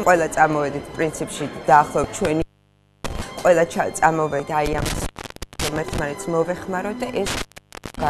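At 2.01 to 2.05 s there's a short blip, about 34 ms long. That's damaged data in a compressed stream: a patch of the encoded file got corrupted, so the decoder misread those frames, lost sync and had to hunt for the next valid frame header. The same glitch comes back at 4.37 to 4.40 s and again at 7.94 to 7.98 s, each one just as brief.

Right after the first blip, from 2.25 to 3.22 s, you get an intermittent contact fault. A loose cable or plug opens the line, and the sound drops out for roughly 626 ms, with crackle where the contact breaks and remakes and faint hiss during the gap. It happens again from 4.66 to 5.99 s with about 535 ms of dropout, and once more from 7.26 to 8.09 s for about 738 ms. That last stretch overlaps the final corruption blip.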